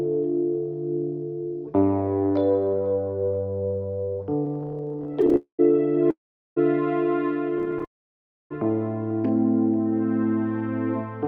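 From 4.45 to 5.36 s the audio catches and drags in about two dozen tiny hitches, each up to 15 ms. This is repeated stalls (stutter): late packets kept emptying the jitter buffer, so the receiver briefly continued the last sound each time.

At 5.36 s it runs straight into a call audio freeze. The sound hangs as a fading buzz that drops to silence for roughly a tenth of a second before resuming at 5.61 s. A second freeze from 6.11 to 6.58 s holds silent for about 0.4 s. Each was likely caused by packets held up in transit, leaving the buffer empty until they arrived and the audio picked up where it stopped.

From 7.58 to 7.85 s the stutter returns with seven short hitches of up to 18 ms. It then gives way to the longest call audio freeze, from 7.85 to 8.52 s, a brief smear followed by about 0.63 s of silence.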